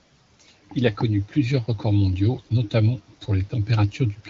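No technical faults are audible in this speech.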